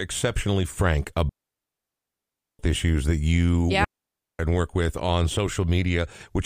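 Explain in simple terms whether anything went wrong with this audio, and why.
Two clean gaps interrupt the speech, from 1.29 to 2.59 s and from 3.84 to 4.39 s. That's a digital wireless dropout: the radio link lost too much data, so the receiver simply muted, leaving near silence with no crackle or burst either side.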